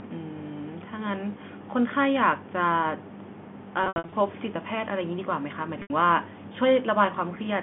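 Packet loss with pitch repetition at 3.84–4.12 s and 5.82–5.90 s: repeated pitch periods bridge the gaps, sounding buzzy and held, with identical waveform cycles fading out.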